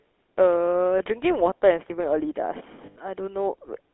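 The whole clip has that GSM full-rate codec sound: a buzzy, gravelly speech band squeezed into roughly 300 Hz to 3.5 kHz, consistent with 13 kbps GSM. Lost GSM frames hit at 0.98–1.03 s, and again for about 100 ms at 2.86–2.98 s. Each time the last good frame gets repeated, leaving a short, rough metallic ring.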